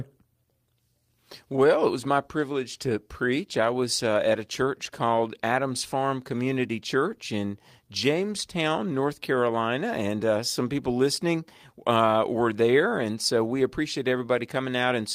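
Nothing is technically wrong with this clip.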